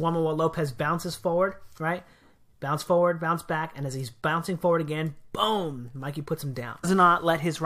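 At 6.83 s the sound jumps abruptly forward with a brief blip, breaking continuity. This is likely a stream segment skipped: one segment of the segmented stream failed to load and playback resumed at the next, dropping that stretch of programme.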